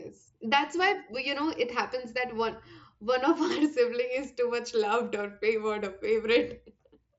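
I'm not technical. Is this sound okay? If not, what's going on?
Yes, no faults found in this speech clip, which comes through an ordinary Bluetooth headset link (mSBC) that stops short of the very highest frequencies, as such links always do.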